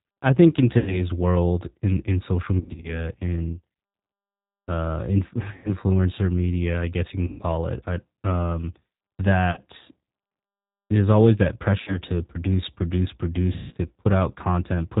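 Throughout, G.729 codec coding limits the speech to below 4 kHz and gives it a rough, synthetic edge. Unlike plain band-limiting, the roughness comes from the coarse pulse-based excitation.

VoIP packet loss concealed by the speech codec strikes at 0.78–1.06 s, 2.60–3.04 s, 5.56–5.75 s (before "media I guess you"), 7.27–7.43 s (after "media I guess you", before "it I um"), 9.51–9.59 s, 11.81–11.99 s and 13.53–13.76 s (after "to produce produce"). Each time the decoder stretches the last sound into a fading buzzy tone or coloured noise instead of leaving silence. Between 60 and 180 ms is missing each time, and the weakened speech lingers briefly afterwards.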